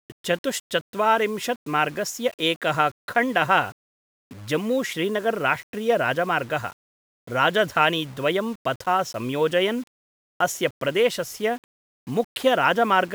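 Speech throughout the clip carries grainy distortion that tracks the signal, roughening quiet passages and making the softest moments sputter or drop out. This is likely low bit depth without dither: about 7-bit rounding, leaving error roughly 30 dB below the speech.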